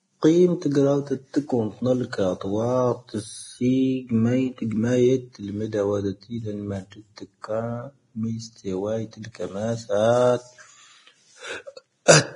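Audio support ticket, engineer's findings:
Vorbis compression, throughout. Hissy, grainy treble; roughened voiced tones and blurred consonant onsets. Nothing above 10.5 kHz. Likely cause: heavy low-quality Vorbis encoding, consistent with a bitrate around 28 kbps. Encoder lowers the cut-off, then quantises the remaining high-band residue so coarsely that fine detail turns to noise-like grain of similar energy.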